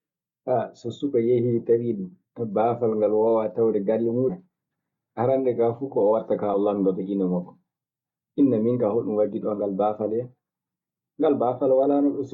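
At 4.29 to 4.32 s and again at 6.53 s, compressed frames are skipped. The speech leaps ahead about a fifth of a second, then about a tenth, consistent with whole 20 ms frames being dropped. Each join is an abrupt jump, visible as a discontinuity in the waveform envelope.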